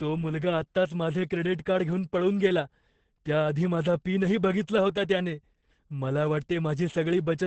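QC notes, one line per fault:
Throughout, Opus voice compression: the speech sounds muffled, hoarse and faintly robotic because the SILK linear-prediction coder runs in wideband and codes the excitation coarsely, which fits a bitrate near 10 kbps. A spectrogram shows a hard ceiling at 8.5 kHz and smeared, grainy harmonics.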